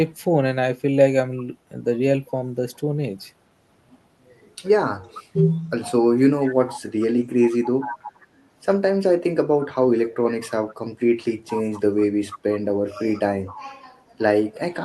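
A faint echo leak flickers at 2.74 to 2.79 s, then stronger ones at 7.51 to 8.27, 11.49 to 12.39 and 12.9 to 13.6 s. Each is a ghost copy of the speech trailing 460 ms behind, likely a far-end speakerphone whose echo canceller didn't fully catch it.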